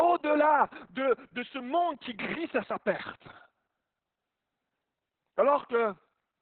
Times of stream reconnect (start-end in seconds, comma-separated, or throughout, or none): none